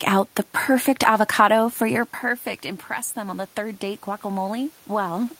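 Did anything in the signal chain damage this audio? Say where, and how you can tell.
Yes. The call-processing stage's automatic gain rising damages the sound from 3.13 s to the end of the clip. After the input fell by about 12 dB, the gain control judged the signal too quiet and began raising its gain step by step. You can tell because the speech and the room noise behind it swell together over more than a second. A talker changing position around two seconds in would move only the voice, not the background.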